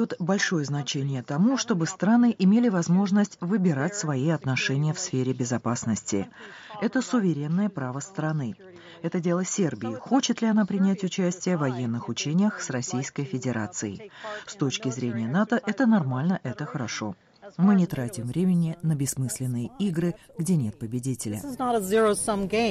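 From the start until 17.88 s, the sound is band-limited, with nothing above 7.2 kHz, and carries a faint background noise about 50 dB below the signal. At 17.88 s it opens up abruptly, with no silence and no jump in level. The likely cause is the input switched to a poorer device, then back. A steady low-pass filter or codec limit would not differ this way: here the tone, the bandwidth and the noise floor all change together at a single instant.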